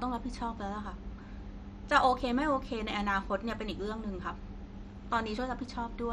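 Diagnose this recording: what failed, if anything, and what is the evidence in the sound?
The codec stage failed, likely through MP2 compression. Throughout the speech, nothing is heard above 13.1 kHz. The damage is heavy: a dull, gurgling, granular texture. Starved of bits, the encoder shuts off upper sub-bands and coarsely quantises the rest. That fits a rate near 56 kbps.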